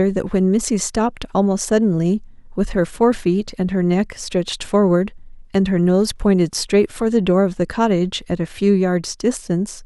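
No technical faults can be heard anywhere in the recording. Nothing in the sound goes wrong at any point along its course.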